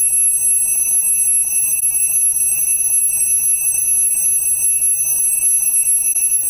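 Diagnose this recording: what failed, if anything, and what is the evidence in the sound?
Sample-format conversion failed. A grainy distortion runs through the whole clip and changes with the sound. It sits roughly 40 dB below the signal. The likely cause is truncation to about 8 bits without dither, so the rounding error tracks the signal.

The codec stage shows corrupt frame concealed. There are concealed frames at 1.80 to 1.83 s and 6.13 to 6.16 s. The decoder spotted damaged frames and covered them itself, by muting or with a scrambled copy.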